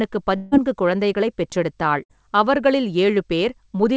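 From 0.36 to 0.53 s, a long network dropout is the likely cause: about 160 ms of speech never arrived. The receiver filled about 155 ms of the gap by stretching the last sound into a fading buzz or hiss, with no silence, and then resumed further along with that stretch missing.

At 2.03 to 2.11 s, a burst of packet loss removed about 60 ms. The receiver concealed it by holding the preceding sound and letting it fade over roughly 59 ms. Speech then picks up beyond the lost section, skipping ahead, while the G.722 call path cuts off everything above 8 kHz.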